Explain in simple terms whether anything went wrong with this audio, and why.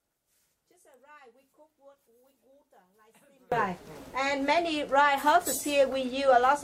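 From the start until about 3.5 seconds, the sound nearly disappears and only a small leftover trace remains, then it comes back. That points to one channel inverted: one side of a stereo recording was likely flipped upside down, so combining both sides cancelled what they shared.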